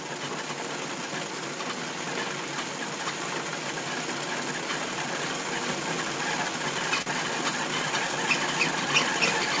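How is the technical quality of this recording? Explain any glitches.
One glitch stands out: a short stall from a late packet at about 7.02 to 7.08 s. The audio runs through a call path whose band stops at 8 kHz, which fits G.722 at 64 kbps. A packet arrived late and the jitter buffer ran dry, so the receiver stretched the last bit of sound for about 42 ms until it arrived. Playback then resumed from the same point. That briefly holds a sound too long, with a faint buzz or dip, and everything after it lands about 42 ms late. Unlike a lost packet, nothing is skipped or replaced with filler, so no sound is missing.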